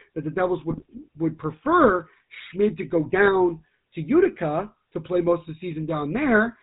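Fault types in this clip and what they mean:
GSM full-rate codec: The speech passed through the old GSM full-rate coder, which rebuilds the voice from a vocal-tract filter driven by sparse, regularly spaced pulses and discards everything above 4 kHz. Throughout, the voice sounds plainly buzzy, gravelly and dull at the top, fitting a 13 kbps coder.
GSM bit errors: Corrupted bits reached the speech decoder, so several frames were rebuilt with wrong filter, pitch or gain values. From 0.7 to 1.05 s the voice breaks into squawks, pops and gargling as the spectrum twists and the level jumps frame by frame.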